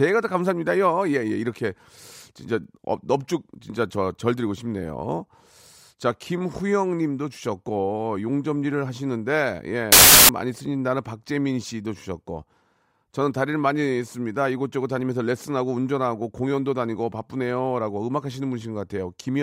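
A speech clip with one clear fault: from 9.92 to 10.29 s the samples are built from the wrong bytes. The reader misassembles each sample, so the busy low bits become the big part of the value. That gives a burst of loud, harsh broadband noise for about 0.37 s.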